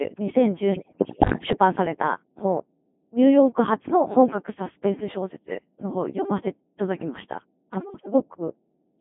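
Throughout, a steady 50 Hz mains hum from a ground loop or transformer sits roughly 20 dB below the speech. It is a fixed tone, unlike drifting rumble. The speech is also heavily mangled by a Codec 2 vocoder at 2.4 kbit/s, band-limited to about 150 Hz to 3.5 kHz. It is rebuilt from sine waves, so the voice buzzes robotically rather than smearing like waveform codecs. From 0.72 to 1.52 s and again from 7.74 to 8.14 s, bit errors on digital voice radio, around one bit in ten, corrupt the frame parameters. The voice lurches in pitch and level into bleeps and warbled gibberish instead of going silent like dropped packets.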